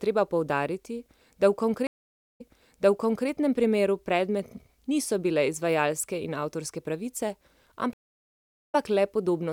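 A stream reconnect occurs twice. At 1.87 s the connection drops, the player goes quiet for 0.47 s, then reconnects and starts a fresh decoder. Playback picks up 0.94 s earlier than where it stopped, so a stretch of speech is heard again, easing in, with the event ending at 3.28 s. At 7.93 s it happens again, with 0.78 s of silence and a restart only 26 ms back, ending at 8.75 s.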